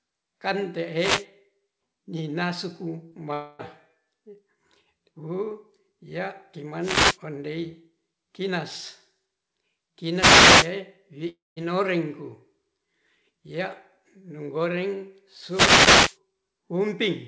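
Around 0.97 to 1.26 s there's the first wireless microphone noise hit, a quick swish of static. The FM radio link fades as reflections cancel each other out, so the receiver's own noise climbs up over the signal. The same thing comes back at 6.8 to 7.18 s, right after "wuu ya" and just before "ondei kinas", then at 10.13 to 10.73 s, and finally from 15.47 to 16.18 s following "ya'nu goreng". Those last two are longer.

At 3.1 s you get a tiny smear, a short concealed packet loss. About 20 ms of audio never reached the decoder in time, and the receiver patched roughly 14 ms of it by extending the sound that came just before, then blended back into the real signal.

Just after that, 3.33 to 3.61 s sounds like a long network dropout, likely a stretch of packets that never arrived. The receiver keeps spinning the last sound out as a fading buzz or hiss for about a quarter second, and what was actually said there is simply gone. 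There's the same kind of gap at 11.29 to 11.58 s, except the fill dies away and leaves about 0.18 s of silence before the audio picks up again.

Throughout, the G.722 call path keeps everything below 8 kHz, so the top end sounds a bit dull.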